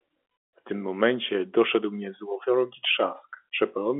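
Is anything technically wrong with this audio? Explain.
No, nothing technically wrong stood out on listening to this speech clip.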